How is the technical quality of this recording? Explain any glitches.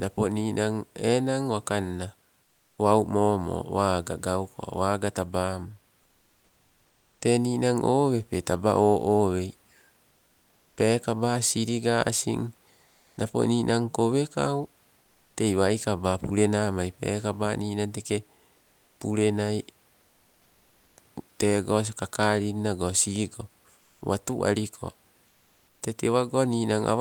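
Two short pauses lose their real background, with the room noise, which sits about 41 dB below the speech, replaced by comfort noise. From 12.85 to 13.17 s, just before "napo ninan kowekau", and from 23.79 to 24.01 s, between "tego kakalin nago sigo" and "watu aliko", the textured room sound gives way to a smooth, featureless hiss. Its level shifts by about 3 dB in the first gap and about 1 dB in the second. This is likely Opus discontinuous transmission: the sender stops sending during silence and the receiver synthesises shaped noise to fill it. Unlike a noise gate, the gaps never drop to true silence; the hiss simply loses the room's detail.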